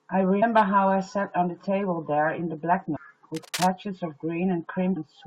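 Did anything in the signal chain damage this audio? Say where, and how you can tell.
Yes. Damaged data in a compressed stream shows up at the codec and storage stage as three short blips, at 0.41 s, from 2.95 to 2.97 s, and at 4.96 s. Each is a brief glitch breaking into the speech. Corrupted bytes in the encoded stream made the decoder misread those frames, lose sync and jump forward to the next valid frame header, so audio there is garbled or dropped.

Cable scratch noise comes from the analogue wiring stage, from 3.34 to 3.69 s: a dense, irregular rustling laid over the speech, sitting about 10 dB below it. This is likely a worn cable, connector or control being moved, with its contact resistance fluctuating rapidly and injecting uneven bursts of noise into the signal. Unlike the codec blips, it is a sustained scratchy texture for about a third of a second rather than a single glitch.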